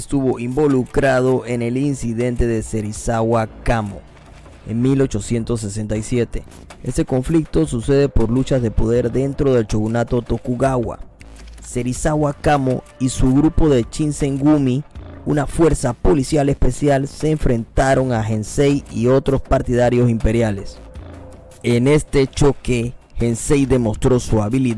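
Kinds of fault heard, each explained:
No faults are heard anywhere in the clip.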